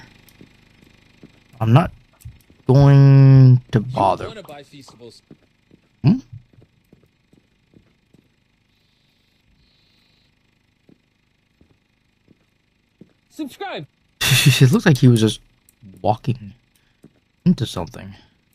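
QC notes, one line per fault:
1.76 s: hard clipping. A peak runs about 2 dB past the level the chain can pass, so its top is cut flat for a moment. The squared-off edge adds high harmonics, heard as a short crackle.
14.63 to 15.08 s: hard clipping. A sustained loud stretch overshoots by about 1 dB, so repeated peaks are flattened over almost half a second. The added upper harmonics give crackle on the peaks across that span.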